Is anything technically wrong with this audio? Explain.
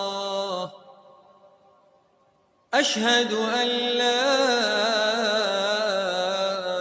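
Yes. A noise suppressor designed for speech was left running on this audio, and it mistakes parts of the sound for noise. The call microphone processing is also audible in a clause of its own: nothing reaches above 8 kHz.

Noise suppressor applied to music or sounds, throughout: the suppressor estimates a noise floor and pulls down anything steady that resembles it, so held tones, ambience and tails keep getting attenuated while onsets slip through. The gain moves over a range of around 10 dB, which makes the level pump and flutter. Unlike a compressor, this isn't tied to loudness. What triggers it is steadiness, so quiet attacks survive while sustained material sinks.

Sound cut by the noise suppressor, from 0.69 to 2.72 s: for roughly two seconds the suppressor classes this passage as noise and turns it down harder than anything else, by about 12 dB at its deepest. Sustained and decaying parts drop away or have their tails clipped short, while sudden parts come through mostly intact. 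That selectivity distinguishes it from a dropout or gain fault, which would cut everything equally.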